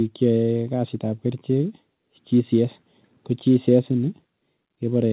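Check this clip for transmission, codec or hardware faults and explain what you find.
No transmission, codec or hardware faults turn up in this speech clip. It has come through a call path that works as intended, and the sound is band-limited with nothing above 4 kHz, which fits a narrowband telephone codec such as G.711 mu-law.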